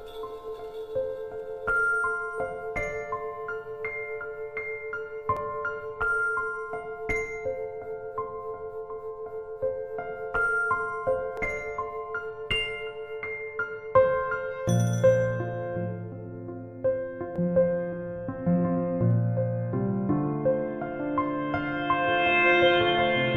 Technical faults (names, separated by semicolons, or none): overlap between stream segments